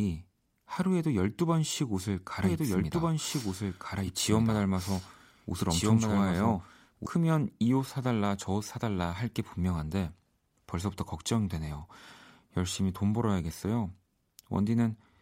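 From about 2.44 s to 7.06 s the speech picks up a doubled audio track: a second copy of the same speech runs roughly a second and a half behind, at about the same level as the original. It's likely a second capture path or an edit that left two copies out of step. The echo copy is dry and full-band with no room tail, and it cuts in and out abruptly at both ends.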